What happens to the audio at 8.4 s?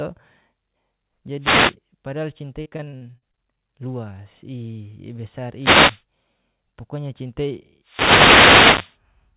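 A wireless microphone noise hit runs from 7.82 to 8.98 s. The radio signal fades, so receiver noise swells into a burst of static over the speech.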